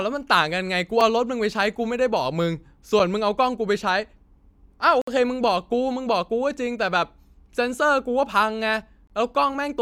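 Gaps between stream segments interrupt the speech at 1.01 s and 2.99 s as brief hard-edged silences of about 3 and 5 ms, then at 5.02 to 5.08 s for 59 ms and at 9.07 to 9.10 s for 24 ms. They fall on the 2 s segment boundaries, where mistimed stamps leave holes the player fills with silence. Unlike a dropout, nothing is lost: the speech resumes exactly where it stopped, just slightly delayed.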